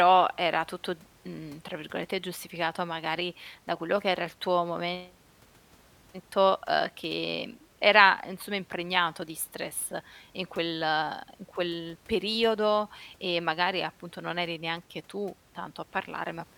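No technical faults can be heard in this recording.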